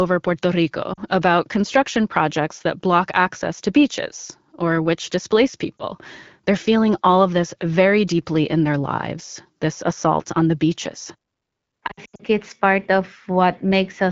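Lost AMR speech frames occur three times, heard through a wideband AMR-WB path whose light coding texture fits a 12.65 kbit/s rate. At 0.93 to 1.00 s, just before "about construction projects that", 40 ms of audio is lost, which fits two 20 ms frames. At 5.78 s, right after "beaches or which displace", a single 20 ms frame drops. From 11.87 to 12.22 s, just before "it's part", 200 ms of losses are scattered across 320 ms, with the longest run at 80 ms. When a frame fails its checksum, the decoder repeats the last good pitch and vocal-tract settings at falling gain, so each loss sounds like a brief warble or dip. In the longer runs the sound sinks toward near silence within two frames. On a spectrogram these show as smeared, repeated harmonics fading into dark vertical gaps, clustered most densely near 12 s. The waveform shows matching envelope dips.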